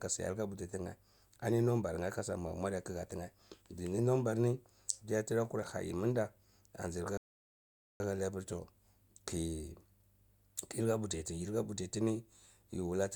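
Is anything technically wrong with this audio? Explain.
Yes. A rebuffering stall runs from 7.17 s to 8.0 s. Playback drained its store of downloaded audio and had to halt until fresh data arrived over the connection. The speech drops abruptly to silence for about 0.83 s, then picks up at exactly the point where it broke off, with "hali apr ton". Nothing is skipped or repeated, so the content stays whole, but the pause stretches the timing.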